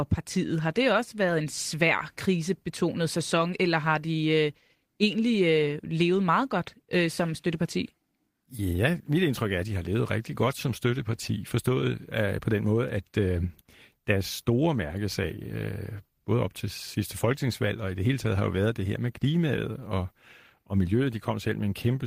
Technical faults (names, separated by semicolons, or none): none